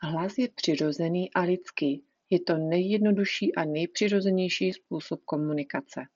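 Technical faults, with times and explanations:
4.71 s, concealed Bluetooth headset packet loss: one short gap of about 7.5 ms, which fits a single lost packet on the link from headset to phone. The receiver filled it by repeating the closest-matching stretch of the speech just before it. A single loss this brief is almost masked, so it passes as a faint hitch. The speech is carried by the mSBC headset codec.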